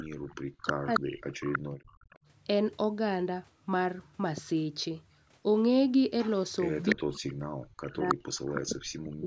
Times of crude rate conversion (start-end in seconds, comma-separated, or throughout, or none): none